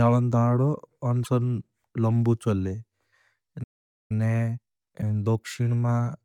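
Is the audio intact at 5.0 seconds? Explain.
No. Two faults overlap at 5.0 s. The first is damaged data in the compressed stream, from 4.98 to 5.03 s. Part of the encoded speech is corrupt there, so the decoder misreads those frames, loses sync and hunts for the next valid frame header. The result is a brief blip of about 50 ms. On a spectrogram it shows as a short vertical smear of broadband or tonal garbage that breaks the harmonic pattern. The waveform shows an abrupt discontinuity at each edge.

The second is time-compressed catch-up, which runs from 4.12 s to the end. After a stall, the player works off its backlog by cutting out tiny pieces of audio and cross-fading across the joins. This plays the speech about 1.1 times faster at its normal pitch, so it sounds hurried. On a spectrogram the formant and pitch tracks stay at the same height but are squeezed in time, with faint periodic seams at the splices. 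The waveform shows syllables packed closer together.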